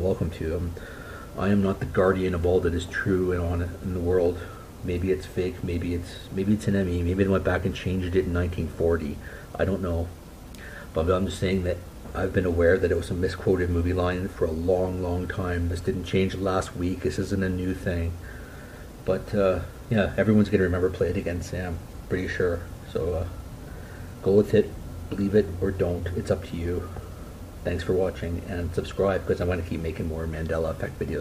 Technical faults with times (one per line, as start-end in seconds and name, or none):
none